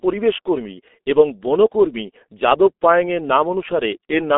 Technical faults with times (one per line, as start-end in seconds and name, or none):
0.00-4.38 G.723.1 codec